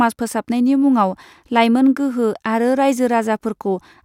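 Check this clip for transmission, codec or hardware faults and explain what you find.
Nothing in the speech points to a problem in transmission, encoding or the playback hardware; the signal stays continuous and stable throughout.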